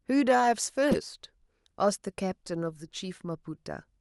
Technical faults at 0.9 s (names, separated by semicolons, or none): corrupt frame decoded